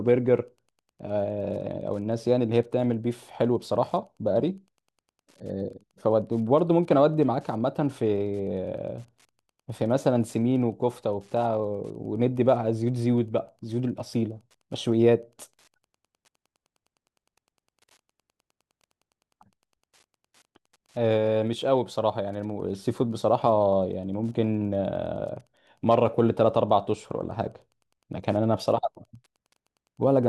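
Throughout the speech, Wi-Fi interference is audible as a faint, steady ticking about ten times a second, well below the voice. A nearby radio's beacons, every 102.4 ms, are rectified by the circuit. On a spectrogram they appear as evenly spaced, thin vertical broadband lines.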